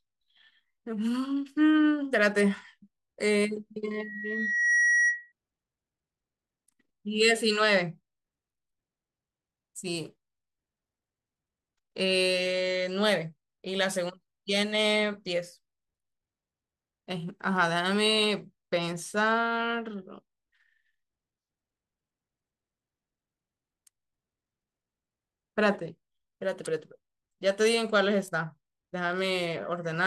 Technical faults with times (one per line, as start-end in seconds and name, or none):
3.91-5.32 loudspeaker feedback squeal